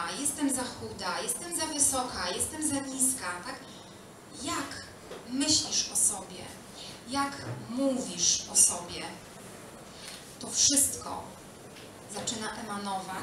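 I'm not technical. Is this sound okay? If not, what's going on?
Yes, nothing stood out as wrong when listening to it.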